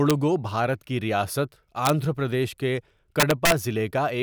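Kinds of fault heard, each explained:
Integer overflow: Loud peaks exceed the integer range and wrap to the opposite sign. Violent cracks land near 0.1, 1.85–1.9 and 3.2–3.52 s.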